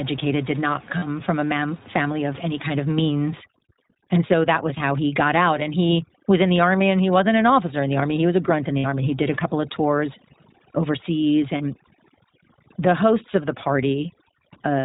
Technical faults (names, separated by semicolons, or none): iLBC codec; lost iLBC frames; overdone noise removal